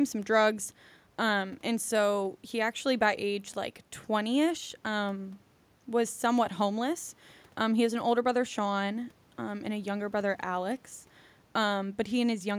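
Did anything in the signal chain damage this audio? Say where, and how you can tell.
No, I can't hear any point in the chain where the speech picks up damage; nothing in the signal points to a fault at any stage.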